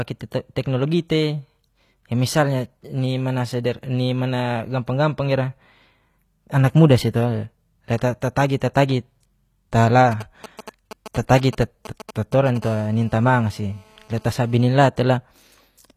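Throughout the speech, s sounds come out gritty and lispy, with a metallic treble that does not match the lower voice. This is likely HE-AAC compression at a rate around 24 kbps: spectral band replication rebuilds the treble from copied lower bands, so harmonics misalign across the crossover.

From 10.12 to 12.58 s, a galloping dit-dit-dit of short, raspy 217 Hz buzzes sits roughly 15 dB below the speech. These are GSM signalling bursts: a nearby 2G phone sends brief groups of radio bursts while signalling, and the audio circuit rectifies them into sound.

From 11.41 to 11.43 s, a brief hiss runs ahead of an attack, and the onset sounds soft and smeared. This pre-echo spans about 21 ms. The codec spreads its quantisation noise across a whole block, so noise meant for the loud attack leaks into the quieter moment before it.

From 12.62 to 14.76 s, a hard, raspy buzz at 217 Hz, full of harmonics and unrelated to the speech, runs steadily about 28 dB below it. 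This is GSM phone buzz from a 2G phone in a call transmitting bursts 217 times a second, rectified by the audio circuit.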